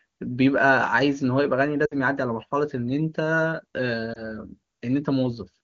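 At 1.85 to 1.95 s the speech smears and then drops away quickly, with about 60 ms of lost audio. That fits three consecutive 20 ms frames failing their checksum. These are lost AMR speech frames: the wideband decoder repeats the last good pitch and vocal tract settings at falling gain, so the sound stretches and fades. At 4.13 to 4.25 s a single 20 ms loss gives a brief dip or warble before the speech recovers, rough for a moment.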